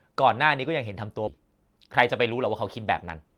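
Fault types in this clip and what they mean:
Skip ahead: at about 1.27 s the speech jumps forward, with roughly 0.7 s dropped and nothing filled in, so the audio on either side is butted straight together and the listener just lands further along.
Jitter buffer speed-up: from 1.87 to 2.47 s the receiver trims tiny pitch-period slices over and over to shrink a backed-up buffer, so the speech runs about 5% fast at unchanged pitch, shaving off a few tens of milliseconds in total.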